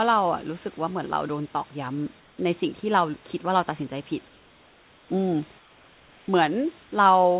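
Speech, with comfort noise in place of the background at 2.2–2.38, 4.28–5.1, 5.58–6.28 and 6.84–6.92 s. Pauses turn flat and about 2–3 dB quieter, likely from discontinuous transmission.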